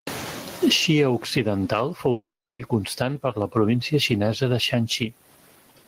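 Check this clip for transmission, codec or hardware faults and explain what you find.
Two faults are present: gain pumping across the whole recording and a long network dropout near the middle.

Gain pumping runs throughout. Loud and soft parts are squashed closer together in level, with the gain swinging by around 20 dB. The likely cause is input gain set far too high with a fast limiter clamping it down on every peak. Unlike plain clipping, the level breathes rather than cracking.

A long network dropout falls between 2.11 and 2.62 s, just before "constant per la província". The receiver fills the gap with a fading buzzy continuation of the last sound, which dies to silence for about 0.37 s before audio resumes. The likely cause is a long run of lost packets, and roughly half a second of speech is gone. Unlike a brief packet-loss glitch, the filler decays into silence instead of covering the gap.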